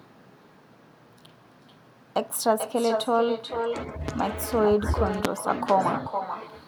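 A speech recording in which the far end played the call over a loudspeaker and its microphone fed it straight back with no canceller, so this is echo with no canceller: every phrase is trailed, around 0.4 s later, by a thinner copy about 7 dB below the speech. Two loud pops sit on top of the talking, which continues underneath. The likely cause is an electrical transient such as a plug, switch or static discharge. The first, at 4.08 to 4.11 s, is a short thump roughly ten decibels above the speech, and the second, at 5.25 to 5.27 s, is a much louder pop, about twenty decibels above it.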